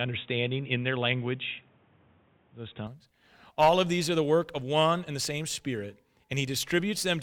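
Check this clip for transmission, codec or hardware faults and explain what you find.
One fault is present: an input switched to a poorer device. From 0.0 to 2.87 s the speech is dull and boxy, with nothing above 3.8 kHz and a faint noise floor about 40 dB down. At 2.87 s it opens to full bandwidth without a gap, and the level shifts by about 5 dB. The likely cause is a narrow-band microphone or headset call profile handing over to the proper input.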